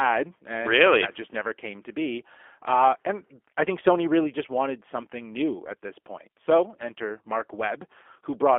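From start to finish the speech carries G.729 codec damage, and it's plainly audible. The band sits roughly between 300 Hz and 3.4 kHz, so there's no low body and no air on top. The codec throws away the actual waveform and rebuilds it from a filter shape, a pitch guess and a few pulses per frame, which leaves the speech rough and a bit synthetic. That's consistent with an 8 kbit/s G.729A link.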